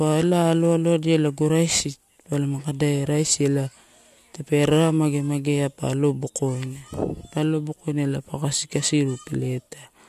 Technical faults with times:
none

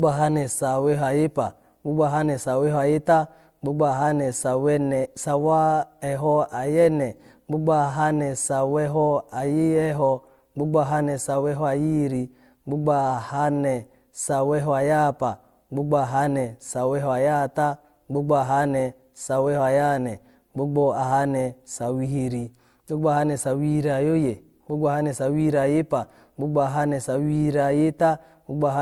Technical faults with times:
0.00-28.81 transcoding between lossy codecs

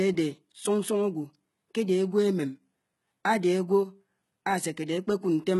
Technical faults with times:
0.00-5.60 HE-AAC compression

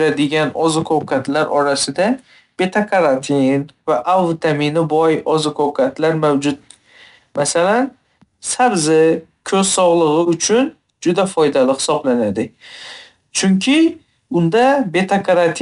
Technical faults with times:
0.00-15.62 4-bit ADPCM compression

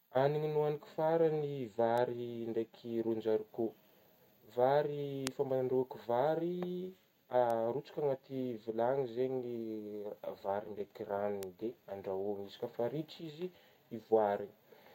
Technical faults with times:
1.98 bit error spike
5.27 bit error spike
7.50 bit error spike
11.43 bit error spike

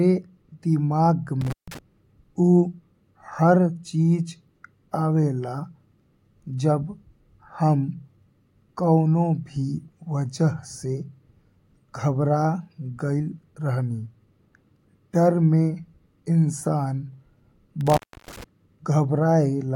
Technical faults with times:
1.41-1.79 intermittent contact
17.81-18.44 intermittent contact

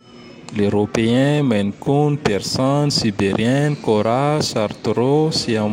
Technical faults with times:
none

